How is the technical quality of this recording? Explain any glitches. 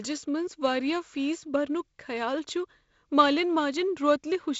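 There are no glitches to explain: the technical quality holds steady, with the speech carried by G.722 wideband telephone coding up to about 7.7 kHz.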